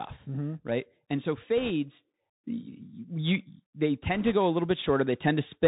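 Throughout, the speech has passed through the Bluetooth CVSD headset codec. Its one-bit up/down steps, consistent with a 64 kbps link, cannot follow fast, loud high-frequency movement. Nothing above 4 kHz survives, s sounds turn scratchy, and a granular hiss sits plainly beneath the voice.

From 0.27 s to 5.63 s, automatic gain rising is audible. The gain control judged the input too quiet and kept raising its gain, about 9 dB in all. Voice and background swell together slowly across nearly the whole clip, not in a sudden jump.

Bit errors on a Bluetooth voice link occur from 1.58 s to 1.70 s and again from 4.15 s to 4.34 s. Bits in the CVSD stream were flipped at a rate of roughly one or two percent. Each flipped bit nudges the waveform by only one step, which grows with the speech level, and the error decays, so there are no sharp clicks. Instead, each stretch carries a brief rushing, crackly noise over the speech.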